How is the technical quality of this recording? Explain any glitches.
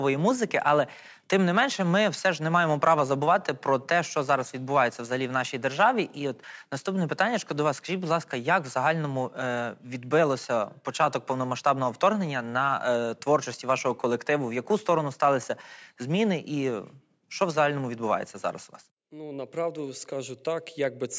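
No technical faults are audible.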